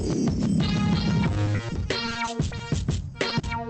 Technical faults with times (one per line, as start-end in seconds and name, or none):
1.45-2.61 repeated packet loss (robotic sound)
3.29-3.45 short concealed packet loss